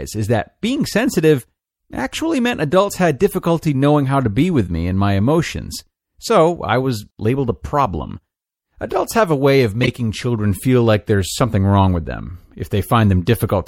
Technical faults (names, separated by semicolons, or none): MP3 compression; corrupt frame decoded